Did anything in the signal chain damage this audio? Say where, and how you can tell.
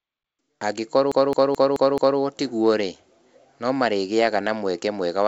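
Yes, at playback, in a classic CD stuck on one turn. From 1.12 to 2.19 s the same 216 ms slice of speech plays five times, each pass ending in a brief mute as the pickup jumps. That even, machine-regular stutter is a scratch kicking the laser back one track on every rotation. The wideband telephone coding upstream is fine: the audio stops near 7.7 kHz as G.722 should, with no codec grit on top.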